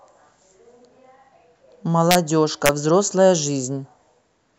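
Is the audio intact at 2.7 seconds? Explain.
No, integer overflow at 2.66 to 2.69 s: speech peaks about 2 dB past the integer limit wrap to the opposite sign, producing a violent, sharp crack.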